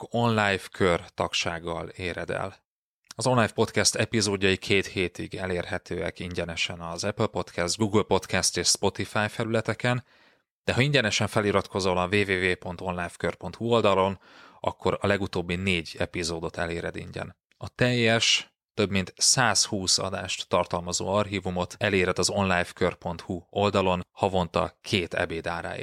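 Nothing in the recording stood out as a technical problem on listening.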